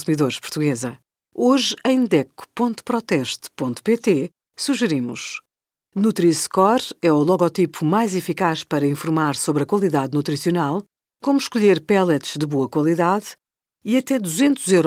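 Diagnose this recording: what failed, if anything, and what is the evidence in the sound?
Nothing failed: no stage in the chain, from analogue wiring through conversion, buffering, processing and playback, leaves any audible evidence on the speech.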